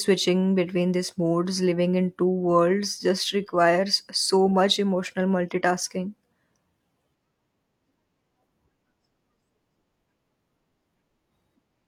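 At 8.51 to 8.55 s the speech jumps forward by around 40 ms: compressed frames skipped, here a single frame, which fits a frame length of 42.7 ms. The decoder never played that frame, either because it was missing from the stream or because it was rejected as damaged. There is no silent gap as in a dropout. The speech simply lurches ahead.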